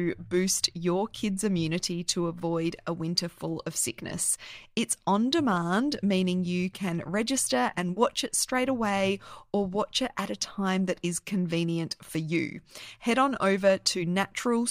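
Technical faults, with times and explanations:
No technical faults are audible in this speech clip.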